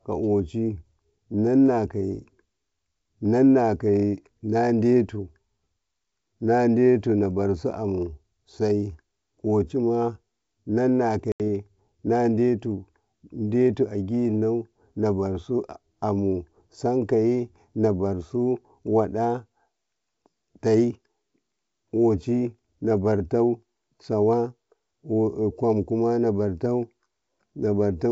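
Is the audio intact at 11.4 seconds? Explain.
No. Packet loss on this ADPCM call opens a hard-edged silent hole of about 80 ms, from 11.32 to 11.41 s, as a few packets go missing. Without them the G.722 decoder's predictor and step size drift from the sender's, so the speech resumes with brief, slight distortion, then settles.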